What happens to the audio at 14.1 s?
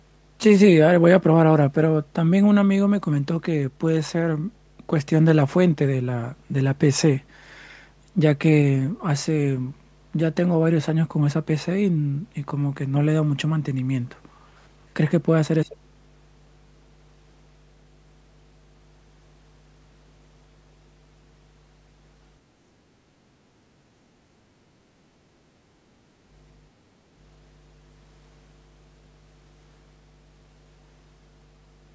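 Mains hum runs steadily through 14.1 s and the whole clip: power-line interference coupled in as a 50 Hz drone about 25 dB below the speech, showing on a spectrogram as an unbroken horizontal line at 50 Hz.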